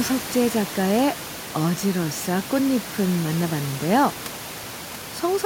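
No technical faults can be heard anywhere in this speech clip. Room noise sits in the background about 14 dB below the speech, as part of the recording rather than anything the system has done.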